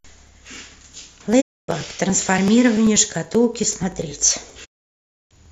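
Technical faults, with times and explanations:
0.08 to 5.46 s, periodic USB or driver dropouts: a regular tick runs through the speech every 0.096 s, about ten times a second, roughly fifty in all. Each one is a few milliseconds of audio simply skipped, not filled with silence, so the waveform jumps across the gap and you hear a small click. That fixed spacing points to something on the system stalling the USB bus or audio driver on a timer, and the ticks only show up while there's sound to interrupt.
1.40 to 1.70 s and 4.64 to 5.33 s, digital broadcast dropout: the speech fades out over 20 ms and goes silent, first for 264 ms, then for a longer 648 ms stretch near the end. That's the receiver muting because it lost the digital stream or got frames that failed their checks, and it holds silence until good frames come back. Whatever speech was sent during those holes is gone, so the sound picks up later rather than where it left off.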